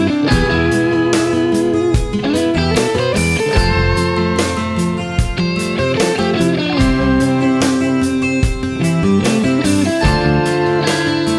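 No technical faults can be heard anywhere in the audio.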